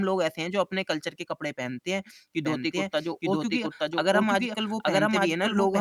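From 2.45 s to the end, a doubled audio track appears: a full-level copy trails about one second behind, likely from a second, slower capture path, showing duplicated waveform and spectrogram patterns.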